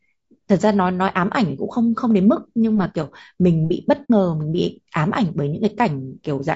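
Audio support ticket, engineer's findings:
Low-delay AAC compression throughout, plainly audible: speech rough and grainy, noise filling between harmonics, thin synthetic top. Likely AAC-ELD at a low rate, around 32 kbps. Short frames smear pitch harmonics and eat bits, so detail goes.

AAC frame loss with muting at 4.04 to 4.10 s: soft-edged dropout. Looks like two frames lost, roughly 60 ms of audio, with the decoder zeroing their spectrum and the overlapping windows fading out and back in.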